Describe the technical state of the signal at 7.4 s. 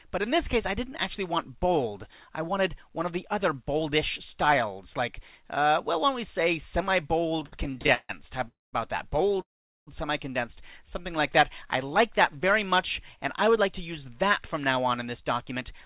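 The sound drags and stutters here, inside a stretch of repeated stalls (stutter) running from 7.3 to 9.41 s: fourteen brief hangs, the longest about 149 ms, where the last sound is stretched and, in the longer ones, faded. Packets arrived late, draining the jitter buffer repeatedly; about 360 ms was filled in, nothing lost.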